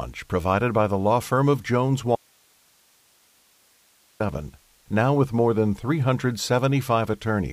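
At 2.16 s the speech drops out abruptly until 4.20 s, about 2.04 s. Only faint hiss remains, roughly 40 dB down: an audio dropout to a faint residue, likely a lost feed.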